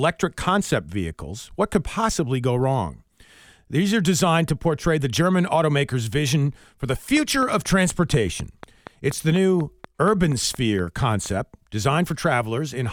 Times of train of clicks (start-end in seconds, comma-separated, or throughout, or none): 7.17-11.27